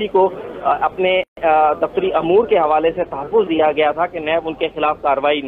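A gap at a join of encoded pieces opens at 1.24 s and lasts to 1.37 s, a silence of about 137 ms cut into otherwise continuous audio, with abrupt edges softened by the codec. The sound then resumes exactly where it stopped. The pieces were encoded separately and butted together without trimming, so each encoder's start-up delay and last-frame padding survive as dead air. The joins fall at 4.0 s intervals.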